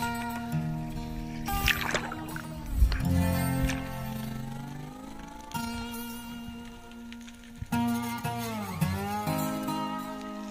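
From 4.12 to 5.68 s the level flutters rapidly, an overlap-add ripple. Frames were rejoined with overlapping windows whose gains don't sum evenly, so loudness dips by about 6 dB once per frame, around 30 times a second, giving a rough, robotic tremolo.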